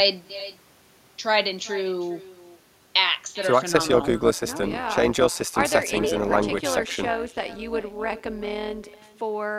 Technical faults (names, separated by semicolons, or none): echo with no canceller; overlap-add ripple